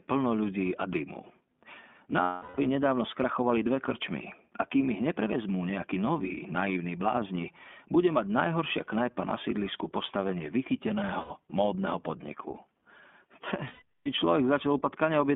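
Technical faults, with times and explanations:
throughout iLBC codec. The speech sits in a narrow telephone band, about 200 Hz to 3.5 kHz. Nothing above that band survives, so sibilants lose their edge. The codec models each short frame's excitation on its own. This leaves a plainly audible rough, slightly synthetic grain on every syllable. The texture fits iLBC's 15.2 kbps mode with 20 ms frames.
2.22–2.60 s, 11.20–11.32 s, 13.68–14.08 s: lost iLBC frames. Packets went missing, and the decoder filled each gap by repeating the last pitch cycle mixed with noise. The gaps last about 0.36 s, 0.1 s and 0.38 s. Each one sounds like a held, buzzy vowel, and the longer ones fade as they go on. The voice returns almost at once, before "nedávno skrachovali dve krčmy" and "módneho podniku".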